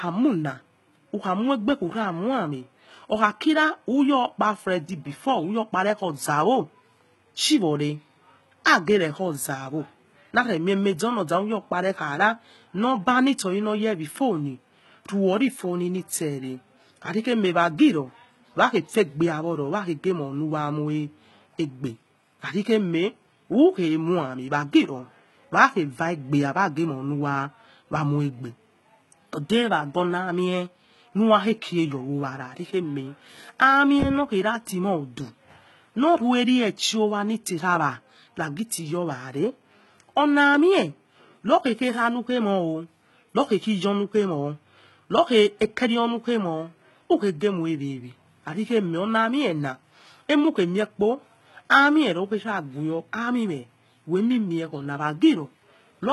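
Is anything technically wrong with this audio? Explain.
Yes. HE-AAC compression runs throughout the speech, likely from a very low bitrate around 16 kbps: only the lower spectrum is truly coded, the treble is rebuilt from copied bands, and nothing remains above 11.8 kHz, so s sounds come out gritty, metallic and lispy.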